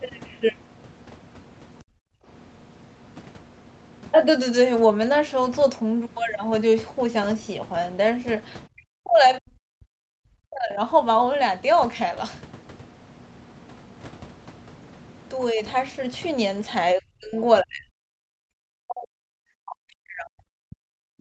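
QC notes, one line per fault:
1.79–1.86 s, 8.72–10.78 s, 16.95–17.38 s, 17.62–18.55 s and 18.73 s to the end: speech suppressed in double talk. The speech dips sharply or breaks up in pieces, by roughly 30 to 40 dB at its deepest. The first dip is very brief. The 8.72 s stretch lasts about two seconds. The likely cause is the echo canceller failing to tell near speech from loudspeaker echo. It then turns both down.
2.14–2.26 s: background gated by the echo canceller. The room sound drops out for about a tenth of a second, falling by about 23 dB. Then it comes back. This happens while the loudspeaker is active. The canceller clamps the microphone hard and then releases it. That leaves a short hole in the background rather than a gradual fade.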